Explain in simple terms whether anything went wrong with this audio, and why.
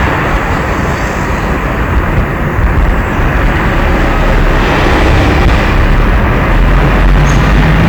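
Hard clipping runs through the whole clip. The audio was pushed well past what a recording stage could handle, so its peaks were sliced flat, roughly 15 percent of the waveform. Those flat tops add harsh high harmonics, heard as a constant fuzzy distortion on every loud moment.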